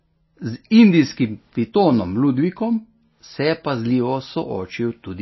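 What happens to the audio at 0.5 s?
At 0.5 s the speech is dull and watery, with nothing above 5.8 kHz, and this persists across the whole clip. The cause is likely MP3 compression: starved of bits, the encoder drops the treble and flickers weak frequency lines, consistent with roughly 24 kbps.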